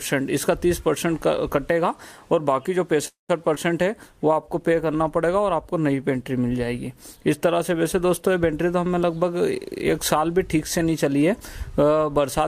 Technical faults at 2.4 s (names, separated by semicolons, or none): none